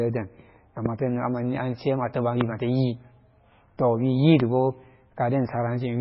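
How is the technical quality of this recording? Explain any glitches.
The recording has two problems: codec damage throughout and three loud pops.

MP3 compression runs through the whole clip. The speech has a heavy watery, swirling texture, and nothing is present above 5.6 kHz, which fits a bitrate around 16 kbps. This is likely because the encoder ran short of bits, so it zeroed weaker spectral lines frame by frame and applied a fixed treble cutoff.

Loud pops occur at 0.86–0.88 s, 2.41–2.43 s and 4.40–4.42 s. Each is a single sharp pop about 15 dB above the speech, with the speech continuing underneath. The likely cause is a sudden voltage step or pulse from a plug, switch, static discharge or driver glitch, which the downstream circuitry shaped into a brief click.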